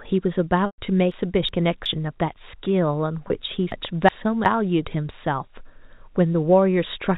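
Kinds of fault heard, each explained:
Packet loss with pitch repetition: Packets went missing in transit, and the receiver covered each gap by repeating the last pitch period of the speech. The longer hole, 0.66 to 0.78 s, lasts 120 ms, so the repeated period fades out into a brief silence before the speech returns through a short cross-fade. The second, at 3.28 s, is only 20 ms and comes across as a slightly held, buzzy note.
Chunks out of order: A block of audio about 372 ms long was delivered or written one chunk late, so it plays after the chunk that should follow it. No audio is missing, but the sequence is swapped, and each swap leaves three hard joins. It happens twice, from 1.12 to 1.86 s and from 3.72 to 4.46 s, and each time the speech sounds briefly jumbled.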